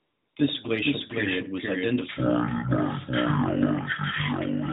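From 0 to 0.36 s the opening is filled with AMR comfort noise. The phone treated the start as silence and sent no speech frames for those 355 ms, so the receiver generated a smooth, steady hiss from a rough level and spectrum estimate. Unlike real room tone, it has no texture or movement, and it switches off abruptly when coded speech begins. That coded speech is narrowband AMR at 12.2 kbps, with nothing above 4 kHz.

Across the whole clip the speech is heard twice, a doubled audio track. A second full-band copy trails by about half a second, around 5 dB quieter, most likely because a slower capture path or a misaligned edit mixed the same audio in again. It is not an echo or reverb. The repeat has no decay and no room colour, so it sounds like a clean second take laid on top, not sound reflecting off walls.

From 2.09 s, right after "glacial period was", to the end, a section at the wrong speed begins. 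The audio runs at 0.507 times its proper rate, likely because it was played against the wrong clock. Pitch falls by about ten semitones together with the slowdown, so the speech turns deep and dragging. This sets it apart from time-stretching, where the pace slows but pitch holds. The change happens in a single step, not as a gradual drift.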